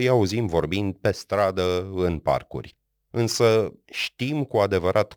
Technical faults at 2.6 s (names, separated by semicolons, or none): crude rate conversion